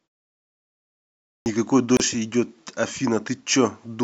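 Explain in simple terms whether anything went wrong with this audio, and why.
Yep, two things go wrong in this speech, both early on.

The first is a clipped start after a pause. The audio sits quiet for about the first 1.38 seconds, and the playback device seems to doze off during that stretch. When the speech kicks in, the device is still waking up, so roughly the first 80 milliseconds, from 1.38 to 1.46 seconds, just never come out. You hear the talking begin abruptly, with its opening sound chopped off.

The second is a gap at a join of encoded pieces, at about 1.97 seconds. A short hole of around 30 milliseconds opens up right in the middle of ongoing speech, then the sound picks up exactly where it left off. That happens when the audio was compressed in separate chunks and stuck back together without trimming the bit of silence each chunk picks up at its edges.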